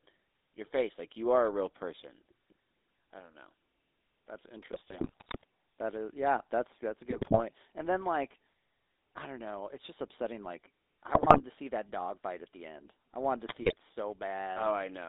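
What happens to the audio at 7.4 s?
GSM bit errors run from 7.1 to 7.43 s, just after "yeah that's that's a", so 7.4 s falls at the tail of the burst. Corrupted bits reached the decoder and scrambled the filter, pitch and gain values, so frames come out with warped spectra or sudden level jumps. The sound breaks into squawks, pops and gargling. The damage fits an error rate near 3 percent across roughly fifteen frames.

Beneath this, the GSM full-rate codec is active at 7.4 s as it is everywhere in the clip. It models the vocal tract and drives it with a sparse, regularly spaced pulse excitation, which gives the sound a plainly audible buzzy, gravelly roughness. The band is limited to about 300 Hz to 3.7 kHz, so the top end is dull and thin, consistent with a 13 kbps stream.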